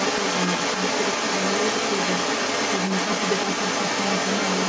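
A switching supply whistle sits under the whole speech clip, a thin tone wandering between about 2.52 and 2.55 kHz, quiet but steady, from a power supply running in an audible burst mode or beating with another one. From 0.0 to 4.68 s there's the other side's voice leaking through, a bit louder than the talker, likely because the echo canceller isn't fully removing loudspeaker playback from the mic.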